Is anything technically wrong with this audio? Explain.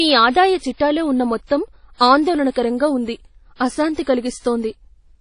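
Yes. Throughout, the speech carries WMA compression artefacts: a ringing, washy quality with hiss that breathes with the voice, and nothing above 10.1 kHz. The likely cause is a low-bitrate transform encoder, which fits around 32 kbps, smearing quantisation noise across long blocks and zeroing weak components. A spectrogram would show a hard ceiling at 10.1 kHz with patchy, holed detail below it.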